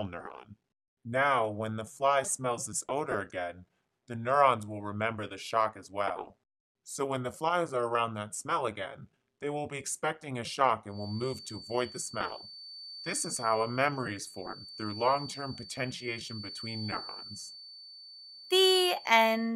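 A feedback whistle enters at 10.87 s and continues to the end of the clip at 19.55 s: a thin, steady tone at 4.5 kHz sitting roughly 15 dB under the main audio, slowly swelling and fading in level. The likely cause is a loudspeaker-to-microphone path running just at the edge of feedback, where loop gain at that one frequency holds near unity, sustaining the tone without letting it build into a full howl.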